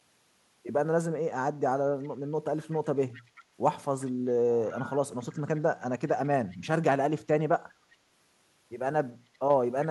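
A speech clip with echo leak: a faint copy of the voice, about 384 ms late and roughly 20 to 35 dB down, surfaces at 2.03–2.09, 2.71–3.43, 4.0–4.11, 4.65–4.85, 5.2–6.09, 6.5–6.57, 7.92–7.96 and 9.82–9.87 s, likely from a loudspeaker echo canceller letting some pickup through.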